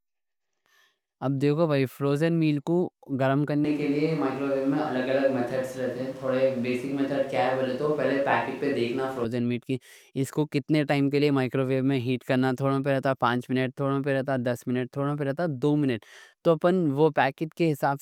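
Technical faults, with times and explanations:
3.65 to 9.24 s, switch to a distant microphone: the close microphone's feed likely dropped out, leaving a pickup further away. The speech turns abruptly roomy and hollow with thinner bass and audible background noise about 25 dB down, level roughly unchanged, snapping back just before "میل کی اس کو".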